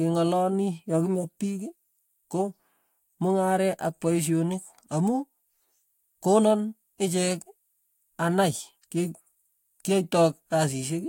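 No technical faults can be heard anywhere in the recording.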